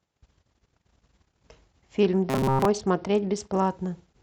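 A speech recording, and from 2.00 s to 3.71 s it suffers a Bluetooth SBC bit pool drop. The treble goes dull and a gritty, grainy noise rises under the voice until the quality recovers at 3.71 s. The sound points to the phone cutting the SBC bit pool from around 31 to around 9, which fits roughly 72 kbps, because the link was congested. With so few bits the upper sub-bands are starved and the rest are coarsely quantised. On a spectrogram, the energy above a few kHz thins out or vanishes across that stretch, and a speckled noise floor fills the bands that remain. Inside that stretch, from 2.30 s to 2.65 s, the voice becomes a rigid, metallic buzz at 133 Hz that still loosely tracks the speech. This is robotic sound from repeated short buffers, likely caused by audio arriving too rarely so that the last segment, about 7.5 ms long, is replayed over and over while most of the real audio is skipped. 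The waveform shows identical short cycles repeating every 7.5 ms, and the spectrogram shows evenly spaced harmonics of 133 Hz.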